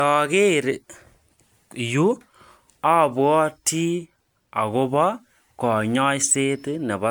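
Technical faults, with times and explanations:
Throughout: generation loss. The speech sounds swirly, smeared and hollow, with blurred onsets. This is likely from about seven rounds of MP3 encoding near 128 kbit/s, each requantising on a shifted frame grid. A spectrogram shows scattered holes and smeared transients, with nothing above 20 kHz.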